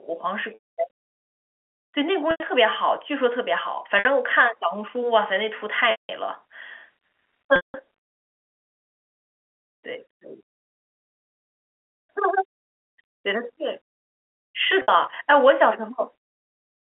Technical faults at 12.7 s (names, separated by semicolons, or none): none